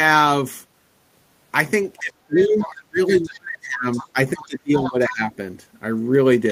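A speech clip where the talker gets pushed down by speech suppressed in double talk from 2.0 to 4.17 s, 4.36 to 4.72 s and 4.88 to 5.24 s, dipping by as much as roughly 30 dB. It's likely the echo canceller, unable to tell this voice apart from the loudspeaker echo while both sides spoke, turning everything down. There's also the other side's voice leaking through in short scraps at 2.39 to 2.82 s, 3.08 to 3.36 s, 3.92 to 4.08 s, 4.42 to 4.46 s and 4.78 to 4.92 s, sitting roughly 15 to 25 dB under the speech, likely loudspeaker pickup the canceller didn't fully remove.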